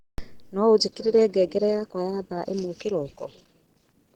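From 0.85 s to the end, the speech suddenly picks up codec artefacts. There is no gap or dropout at the switch, only an abrupt drop in quality. This is an adaptive stream at a lower bitrate: the player switched mid-stream to a leaner encoding, and the change in sound points to a step from about 64 kbit/s Opus down to about 16 kbit/s.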